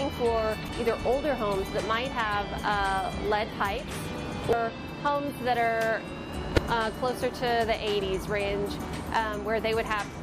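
Short blips break into the sound three times: from 0.66 to 0.69 s, as a brief blip at 4.53 s, and again from 6.54 to 6.58 s. These are damaged data in a compressed stream. At each point some bytes of the encoded stream were corrupted, so the decoder misread those frames, lost its place, and had to hunt for the next valid frame header before playback could resume cleanly.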